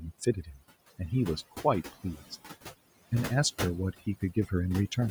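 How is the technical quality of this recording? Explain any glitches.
The speech in this recording has been damaged by heavy-handed noise processing, and the suppressor also clips parts of the speech twice.

Overdone noise removal runs through the whole clip. The reduction was set too strong, so it shuts off individual frequency bands whenever they sit near its noise estimate, taking quiet parts of the voice with them. The background drops and breaks up into twinkling specks.

Noise suppressor artifacts are also present throughout. The suppressor pulls down bands it judges to be steady noise, frame by frame, cutting the noise by about 17 dB. The room noise, sitting about 15 dB below the speech, sinks in the gaps and surges back under the words.

Speech cut by the noise suppressor happens twice, from 0.26 to 0.62 s and from 3.93 to 4.52 s. Here the suppressor mistook parts of the speech for noise and turned them down with the background, by up to about 12 dB in the first stretch and about 18 dB in the second. 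Roughly a tenth of a second or more of speech in each span sounds swallowed or faint.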